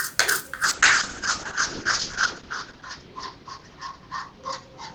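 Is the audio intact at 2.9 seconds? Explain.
No. A call bitrate drop runs from 0.64 s to the end. The encoder fell from 128 to 6 kbps, cutting bandwidth from 20 to 8 kHz. The sound turns coarse and muffled.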